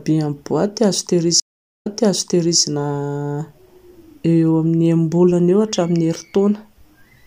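At 1.40 s the stream reconnects: the connection dropped, the player fell silent, then reconnected and started a fresh decoder partway through the stream, with the server resending a short burst of earlier audio. The speech cuts out for about 0.43 s, then picks up again 0.78 s earlier than where it stopped, so a stretch just heard is replayed before the speech continues forward, the disturbance running until about 2.61 s.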